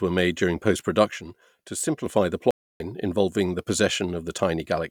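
Right after "were made during", at 1.11 s, the speech suddenly sinks by about 6 dB and stays there until 2.06 s. That's likely one channel dropping out: with one side of the stereo gone, the mono sum keeps only half of what both channels shared. At 2.51 s the audio cuts to dead silence for about 294 ms, then picks back up at 2.80 s just before "involving the". It sounds like a playback stall, with the player likely starved of data or blocked until it recovered.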